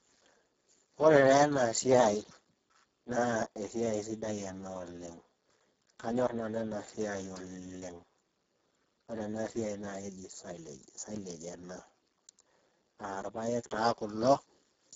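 From start to finish the speech carries heavy Speex codec damage: hoarse, noisy and edging toward robotic, which fits a very low setting around 6 kbps starving the excitation of bits. Nothing reaches above 7.6 kHz, and the top band sounds like a thin noise fill.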